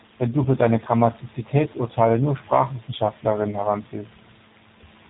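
A speech clip carrying G.729 codec damage from start to finish. The damage is plainly audible. Nothing survives above 3.8 kHz, so the sound is narrow and muffled at the top. The speech is rebuilt from a vocal tract filter, a pitch predictor and a few pulses per short frame, not sent as a waveform. That gives it a rough, slightly synthetic edge. The sound suggests the G.729A variant running at about 8 kbit/s.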